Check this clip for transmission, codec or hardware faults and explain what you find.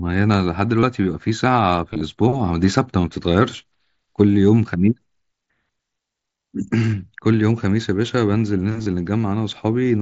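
Concealed Bluetooth headset packet loss occurs in four short spots: 0.80 to 0.83 s (30 ms lost), 1.93 to 2.01 s (45 ms lost, scattered across 75 ms, longest run about 22 ms), 4.14 s (15 ms) and 8.83 to 8.86 s (30 ms). Packets between the headset and phone were lost, so the receiver filled each gap by repeating the best-matching recent stretch of waveform. In this wideband speech, carried up to 8 kHz by the mSBC headset codec, the gaps give a short, buzzy held tone at full level, with a slight warble where the real speech resumes.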